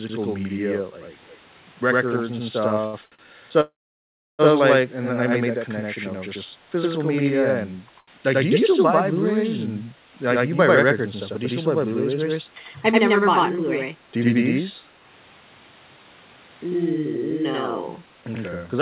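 This is a speech clip that has passed through a narrowband call path: nothing reaches above 4 kHz, and the coding noise fits a 64 kbps G.711 mu-law codec. Throughout the clip there is a channel delay (doubling). One channel runs 92.88 ms behind the other, which fits a 4096-sample buffer, and when the two are summed to mono the speech is followed by an equal-level slap. A waveform shows every onset twice, about 93 ms apart, and a spectrogram shows comb-like notches. Two brief echo leaks follow, at 1.27–1.37 s and 2.12–2.23 s. Each is a copy of the speech arriving 219 ms late, about 30 dB and about 15 dB below the speech respectively. The likely cause is a loudspeaker-side echo canceller letting residue through. On a spectrogram these appear as repeats of earlier harmonic patterns. From 2.81 to 3.22 s there are repeated stalls (stutter): the jitter buffer ran dry four times, with the longest gap lasting 74 ms, and about 195 ms of extended sound was inserted without anything being lost. 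The speech drags, and a spectrogram shows smeared, held frames interrupting the harmonics. A call audio freeze follows from 3.61 to 4.42 s, likely caused by packets held up in transit. The last sound is continued and fades, leaving 0.68 s of silence, visible as a flat waveform and an empty spectrogram, before the speech resumes where it stopped. At 7.99–8.10 s, a short stall from a late packet stretches one sound by 86 ms, showing as a brief horizontal streak. Finally, there are two jitter buffer speed-ups, at 12.73–14.17 s at 105% and at 17.98–18.75 s at 111%. Each removes roughly 0.1 s as pitch-period snippets, so the speech sounds hurried without any change in pitch. A spectrogram shows compressed timing, with the harmonic spacing left unchanged.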